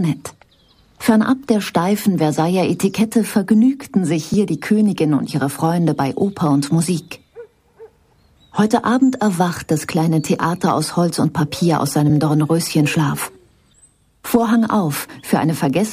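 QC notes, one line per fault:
4.34 s and 12.10 s: block of digital silence, two 2.9 ms hard drops to silence, each a sharp tick, which fits a missed 128-sample buffer.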